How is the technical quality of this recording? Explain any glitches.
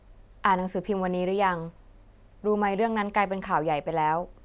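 No glitches to report; the recording holds steady throughout with no audible technical faults.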